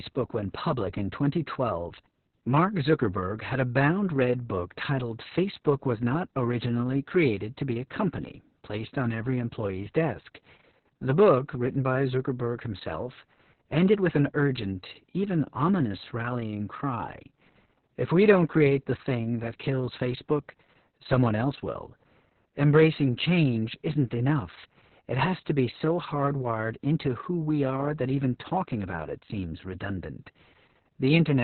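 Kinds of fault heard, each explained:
Opus voice compression: The speech sounds muffled, hoarse and a little robotic from start to finish. Nothing is heard above about 4.3 kHz, a narrowband cut. The coarse, heavy coding points to the SILK speech coder at a very low rate, around 6 kbps.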